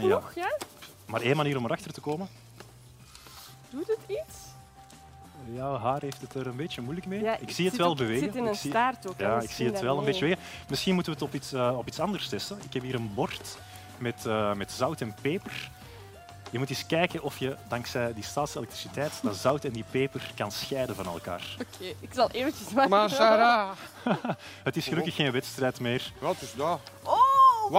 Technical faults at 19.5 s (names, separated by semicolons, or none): dropped samples